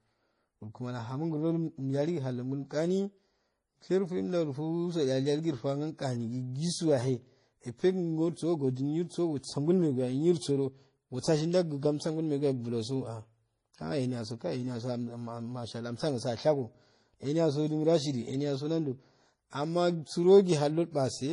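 Right from the start and all the way through, nothing in the speech reaches above about 10.5 kHz, and two flavours of swirly, smeared artefact sit on top of each other. That's likely transcoding between lossy codecs, which fits an MP3 pass re-encoded as low-rate AAC-LC.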